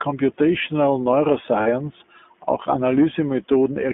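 From the start the whole clip runs through the iLBC codec, and you can clearly hear it. The speech sits in a narrow telephone band, roughly 200 Hz up to 3.5 kHz, so there's no air or sparkle on top and not much low body either. Each short frame's excitation is coded on its own, which gives the voice that slightly rough, synthetic grain. The character fits iLBC's 20 ms, 15.2 kbps mode.

Then at about 1.62 to 1.67 s there are lost iLBC frames, roughly 40 ms missing, which fits two 20 ms frames. The decoder fills the hole by repeating the last pitch cycle with some noise mixed in, so for that moment the sound turns into a brief held, faintly buzzy vowel instead of real speech. Because iLBC frames don't depend on the ones before them, the voice snaps back to normal right after the gap.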